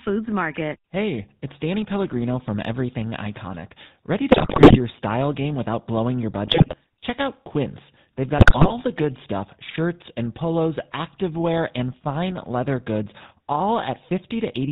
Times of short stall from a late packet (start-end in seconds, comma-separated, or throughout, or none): none